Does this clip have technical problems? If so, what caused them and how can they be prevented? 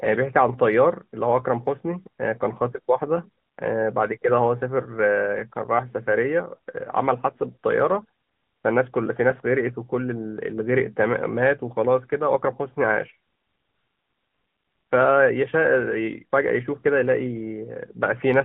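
Yes. The speech has passed through the AMR narrowband mobile codec for its whole length. The audio is confined to roughly 150 Hz to 3.5 kHz, so it sounds thin and muffled. AMR-NB resynthesises the voice from a vocal-tract model excited by a few pulses per 5 ms subframe, leaving plainly audible buzzy, synthetic artefacts that fit a mid-rate mode near 10.2 kbps. To prevent this, record locally or use a wideband codec instead of a narrowband mobile call path.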